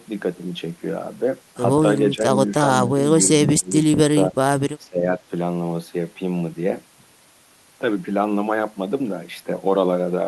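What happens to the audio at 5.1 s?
From 4.85 to 5.22 s the speech dips by around 15 dB, likely speech suppressed in double talk: with both sides talking at once, the echo canceller could not separate the talker from loudspeaker echo and turned it down.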